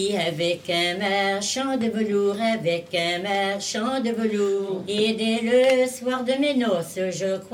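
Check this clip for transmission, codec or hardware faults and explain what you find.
I hear no faults anywhere in this audio.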